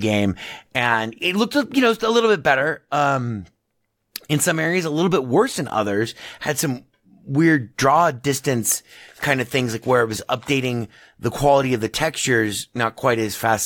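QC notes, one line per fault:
No faults heard on the speech at any point; nothing to log.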